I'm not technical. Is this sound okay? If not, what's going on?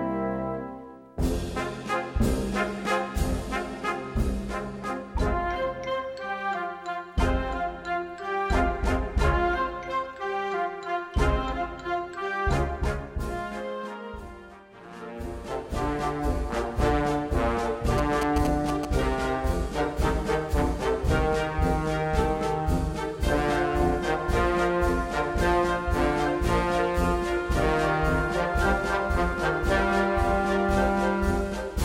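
No. At 17.98 to 18.85 seconds there are GSM signalling bursts. A 2G mobile phone nearby sent short groups of radio pulses, the kind it sends just before a call or text arrives, and the audio equipment picked these up and turned them into sound. You hear a quick galloping pattern of short harsh buzzes, pulsing about 217 times a second, nearly as loud as the recording itself, for just under a second.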